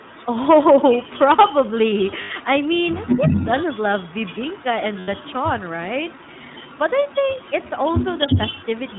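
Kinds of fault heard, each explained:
iLBC codec: Narrowband speech coding that treats each frame independently, here at about 15.2 kbps, which fits 20 ms frames. Nothing above 4 kHz survives, and the speech carries a plainly audible rough, slightly synthetic texture throughout.
Echo leak: A delayed copy of the speech trails it by about 351 ms, likely from loudspeaker playback that the far-end echo canceller did not fully remove. It appears in stretches from 0 to 8.99 s, ranging from faint to roughly as loud as the speech.
Lost iLBC frames: Two gaps, at 2.22–2.31 s and 5.00–5.10 s, each lasting 80 ms, which fits four 20 ms frames. The decoder fills each gap with a held, slightly buzzy repetition of the last pitch cycle, then clean decoding resumes almost immediately.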